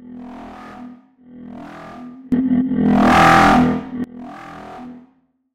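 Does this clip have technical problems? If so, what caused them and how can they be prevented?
Yes. There is a sudden gain jump from 2.32 s to 4.04 s. The audio and its background noise rise by about 24 dB, then drop back. This is likely a digital gain change applied instantly, without a ramp. Ramp every gain change over a few milliseconds.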